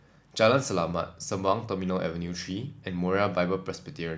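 No technical faults can be heard in this recording.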